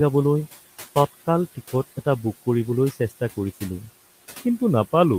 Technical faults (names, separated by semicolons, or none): noise suppressor artifacts